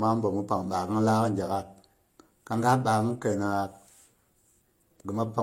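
Transcoding between lossy codecs affects this speech clip throughout. Nothing sounds above 16.2 kHz, and two different sets of coding artefacts blur together, likely from an MP3 encode later re-encoded as low-bitrate HE-AAC.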